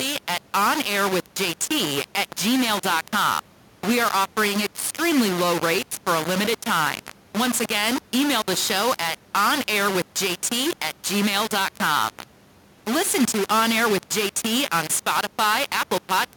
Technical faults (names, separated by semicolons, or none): low bit depth without dither